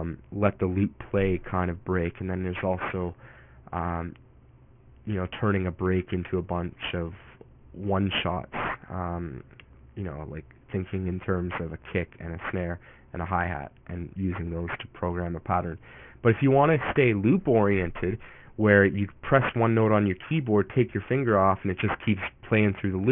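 Aliasing runs throughout. The sample rate was likely cut to about 6 kHz without filtering. Content above 3 kHz folds back, adding gritty, metallic tones roughly 15 dB down.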